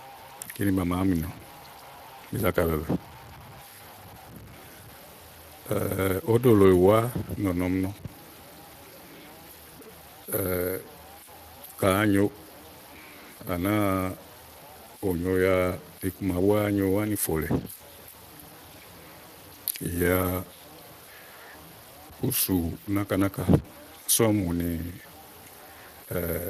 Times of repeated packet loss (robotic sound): none

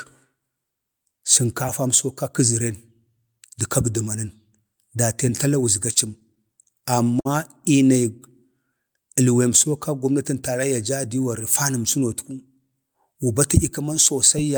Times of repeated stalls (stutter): 5.93-7.27

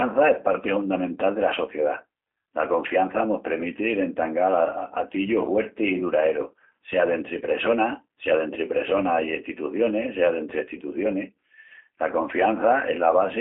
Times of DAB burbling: none

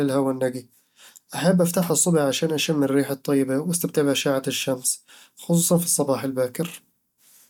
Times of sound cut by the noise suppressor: none

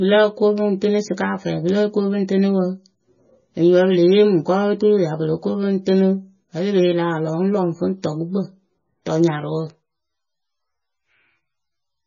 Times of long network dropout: none

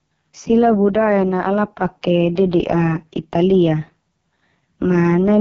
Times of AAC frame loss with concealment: none

